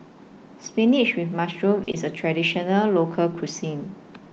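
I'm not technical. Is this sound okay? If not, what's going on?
No. At 1.83 to 1.89 s there is a short stall from a late packet: a piece of the call arrived late, so the speech briefly held its last sound, then carried on.

At 1.91 to 1.95 s there is a short concealed packet loss: a tiny slice of speech never arrived, so the receiver filled the gap by extending the last sound, heard as a brief smear.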